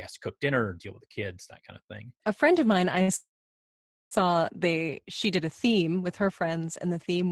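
At 3.02 s the speech catches for a moment. This is a short stall from a late packet. The packet was not there in time, and the jitter buffer ran dry. The receiver held the last sound for about 58 ms, until 3.10 s. It sounds like a slightly stretched syllable with a faint buzz or dip. Nothing is lost. The speech picks up where it paused, now running 58 ms later.

A longer break comes at 3.16 s and lasts until 4.13 s. This is a call audio freeze. The last sound carries on briefly as a fading buzz or hiss, and then about 840 ms of silence follow. The whole gap fills about 953 ms. The likely cause is packets held up in transit, which left the jitter buffer empty. When they arrive, speech resumes with "they she did", and nothing is missing.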